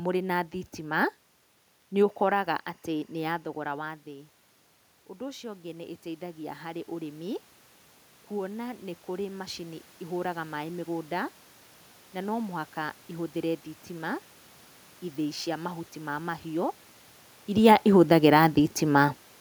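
From 2.08 to 4.08 s a faint chirping warble sits behind the speech, flipping between pitches near 1 and 2 kHz, well down, roughly 40 dB under the voice. This is timecode bleed: linear timecode from a nearby track or cable leaking into the audio, with a rhythm that fits 23.976-frame code.

From 5.18 to 7.42 s the voice and room noise swell together by about 5 dB. This is automatic gain rising: the input had dropped by about 17 dB, so the gain control slowly raised its gain to compensate, lifting the background along with the speech.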